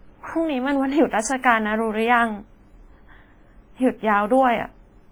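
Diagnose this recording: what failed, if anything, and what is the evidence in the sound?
Across the whole speech recording the sound rings and smears, with a washy hiss that swells and fades along with the voice and thin detail that drops out entirely. The failure sits at the codec stage, and the likely culprit is heavy WMA compression. Long transform blocks spread quantisation noise over tens of milliseconds around each syllable, and the weakest spectral lines are zeroed, which fits a low bitrate of around 24 kbps.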